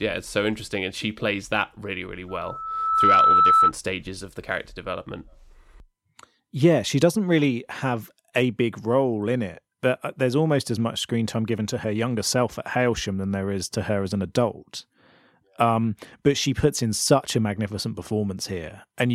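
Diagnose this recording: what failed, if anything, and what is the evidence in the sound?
Loudspeaker feedback squeal in the analogue path, where the microphone picks up the loudspeaker it feeds. From 2.28 s a single tone at 1.3 kHz rises out of the speech, swelling over roughly the first 0.7 s until it sits about 10 dB above the speech, and it ends at 3.72 s. At that frequency the gain around the acoustic loop exceeded one, so the tone built on itself until the loop was broken.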